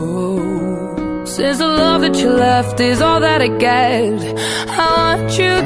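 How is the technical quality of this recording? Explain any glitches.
The recording has no glitches to explain. No dropouts, clicks, distortion or timing problems can be heard anywhere in the audio.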